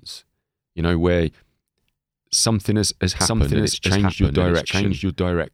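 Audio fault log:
3.21–5.54 s doubled audio track: after "something has has", a dry full-band copy at similar level cuts in abruptly, trailing about 0.7 s behind to the end, likely from a second, slower capture path.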